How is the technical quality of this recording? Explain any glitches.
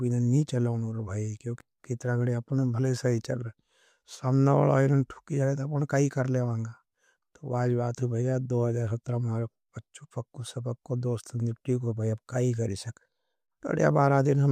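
No glitches turn up anywhere in this speech recording. Nothing interrupts or degrades the audio at any point.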